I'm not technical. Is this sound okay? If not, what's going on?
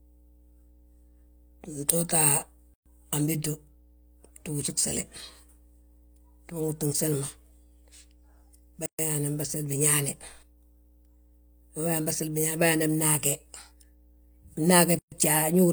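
No. A steady low buzz runs under the speech the whole time. This is mains hum, a 60 Hz tone from the power line leaking into the recording. A ground loop or a nearby transformer is the usual cause.

The speech also briefly drops out at 2.74, 8.86 and 14.99 seconds, every 6 seconds. Each silence lasts about an eighth of a second. Each is a gap at a join of encoded pieces, where separately compressed sections were stuck together with their padding left in.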